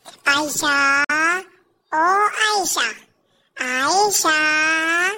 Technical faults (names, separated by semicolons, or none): clock slip clicks; Bluetooth dropout